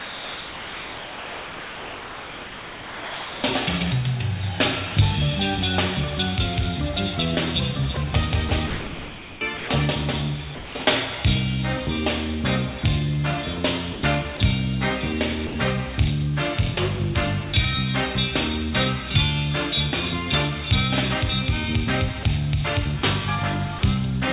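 From 0.0 to 3.43 s the sound is replaced by steady synthetic hiss, and it returns only when the detector triggers again. The cause is likely sound dropped by the voice detector, which treated the material as background and sent comfort noise instead. The same brief substitution recurs at 7.95 s, 15.47 to 15.55 s, 22.23 s and 23.79 to 23.83 s. Between 8.49 and 9.69 s, 10.55 and 10.87 s, and 13.93 and 14.39 s, the sound turns choppy, with about 880 ms, 220 ms and 120 ms replaced. That is likely sound chopped by the voice detector, switching repeatedly between sending and muting.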